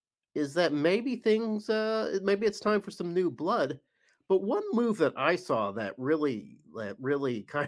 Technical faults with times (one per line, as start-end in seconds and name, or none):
none